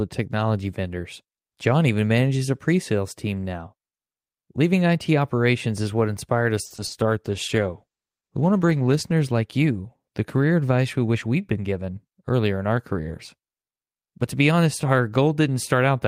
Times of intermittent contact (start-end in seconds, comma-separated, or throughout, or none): none